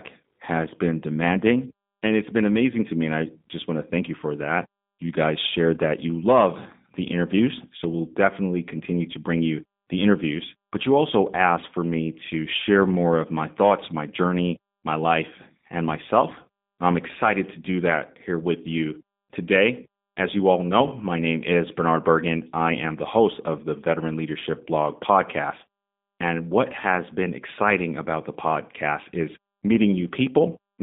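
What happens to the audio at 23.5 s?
At 23.5 s the speech carries G.729 codec damage, which runs through the whole clip rather than starting there. The voice is rebuilt from a vocal tract filter, a pitch predictor and a few pulses per frame, so it sounds plainly rough and slightly buzzy, consistent with an 8 kbit/s codec, inside a narrow line band of about 150 Hz to 3.7 kHz. A simple telephone band filter would thin the sound without adding this synthetic graininess.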